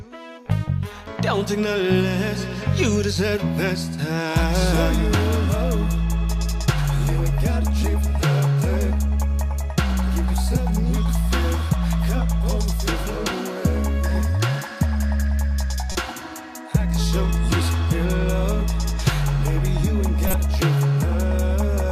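Corrupt frame decoded at 15.92 s and again at 20.27 s: damaged bits inside compressed frames were played out rather than concealed, so misread gains and codes put energy at the wrong frequencies. The first lasts about 36 ms across what sounds like a few frames, a short glitch peaking near -15 dBFS. The second runs about 66 ms over perhaps two frames and is much louder, reaching roughly -5 dBFS.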